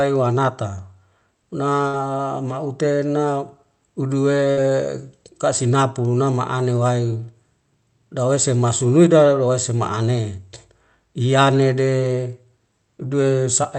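Speech, band-limited to about 8 kHz by the call codec, with two bursts of packet loss at 1.87–1.96 s and 4.51–4.60 s. Each time the receiver stretches the preceding sound for about 57 ms, fading it down, then playback jumps ahead, skipping 60 ms of audio.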